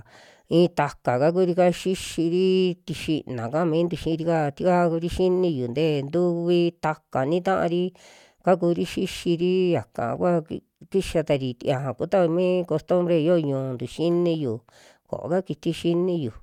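Speech recording with no technical faults to report.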